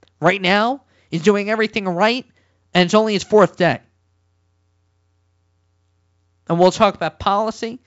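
No technical faults can be heard anywhere in this speech. It carries the sound of G.722 wideband telephone coding at 64 kbit/s, with at most a faint trace of the codec and nothing above about 7.7 kHz.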